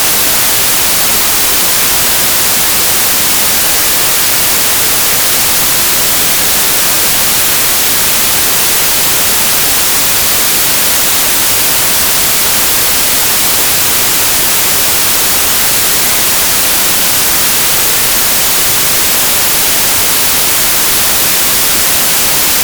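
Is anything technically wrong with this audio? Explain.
Yes. A wrong sample width affects the whole clip. The data appear to have been written as packed 24-bit integers but read as 32-bit integers. Each sample is taken from four bytes instead of three, so the byte boundaries drift. Most values mix bytes from neighbouring samples. Only some keep the true top bits. The result is loud, harsh noise with the original sound buried inside. That buried sound runs about 1.33 times too fast and pitched up by the same ratio.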